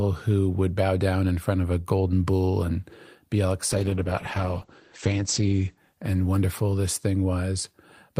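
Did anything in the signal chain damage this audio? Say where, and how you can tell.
Yes: a call bitrate drop from 3.72 to 7.11 s, right after "bull and be all", damaged the audio at the codec stage. The speech turns rough and muffled because the network's bandwidth estimate fell and the encoder coded with far fewer bits. The top end collapses from about 20 kHz to 8 kHz, which points to a fall from around 48 kbps to roughly 11 kbps. The worst stretch lasts about 1.8 s before quality recovers.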